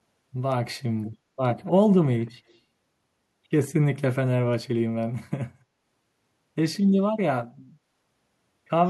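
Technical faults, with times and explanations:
1.10–1.16 s, 1.66–1.71 s, 2.29–2.59 s: echo leak. A faint copy of the speech returns about 166 ms late, very quiet and quietest in the last stretch. This is likely a far-end loudspeaker echo that the echo canceller did not fully remove.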